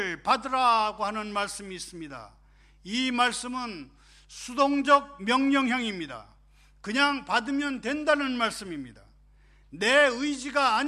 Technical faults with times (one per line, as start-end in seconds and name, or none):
0.00-10.88 mains hum